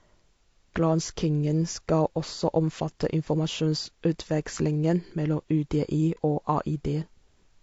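Throughout, the speech was squeezed through a low-bitrate codec, likely low-delay AAC compression (AAC-ELD) at about 32 kbps. Its short frames resolve pitch harmonics poorly, so the voice sounds plainly rough and grainy, with noise filling the gaps between harmonics and a thin, synthetic-sounding top band.

From 6.15 to 6.19 s there is AAC frame loss with muting. The decoder zeroed a missing stretch of spectrum, and the overlapping windows fade the sound out and back in around it. This leaves a brief, soft-edged hole that fits one lost frame of about 30 ms.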